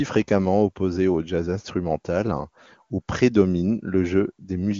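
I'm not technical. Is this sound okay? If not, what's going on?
Yes, this one's fine: there's nothing wrong to point to in this bit of speech, which has come through the AMR wideband (HD Voice) phone codec with little or no trace of it.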